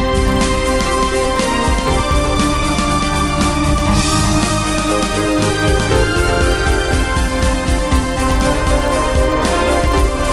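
Throughout, a resampler restarted on every block leaves an error at each 40 ms block edge, heard as a 25 Hz tick-buzz, consistent with a 24 kHz to 48 kHz conversion. Unlike mains hum, it vanishes in silence; unlike dropouts, its ticks are perfectly regular.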